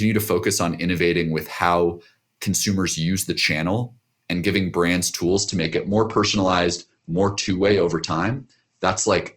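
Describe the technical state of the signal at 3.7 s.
At 3.7 s the speech signal is intact, with no audible fault at that moment.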